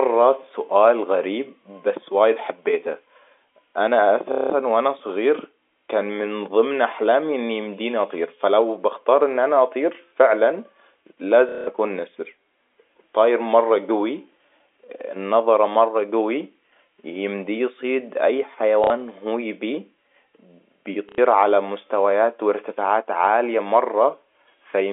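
Packet loss with the last packet repeated occurs four times. Packets failed to arrive, and the receiver replayed the last good one to fill each gap. At 4.32 to 4.50 s and 11.49 to 11.67 s, 180 ms is filled this way. Shorter gaps follow at 18.84 to 18.90 s (60 ms), between "يمديه يصيد اي" and "هو يبيه", and at 21.09 to 21.18 s (90 ms), just before "على مستويات وارتفاعات عالية". The repeats buzz at roughly 33 Hz, which fits 30 ms packets, giving a brief robotic stutter over the band-limited G.711 telephone sound.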